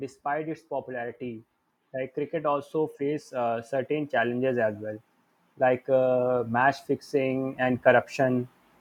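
A speech recording with automatic gain rising twice: from 0.22 to 4.8 s the level climbs by about 8 dB, then from 5.42 to 8.47 s by about 5 dB, voice and background noise swelling together. On a waveform the envelope widens steadily, and a spectrogram brightens evenly across all frequencies.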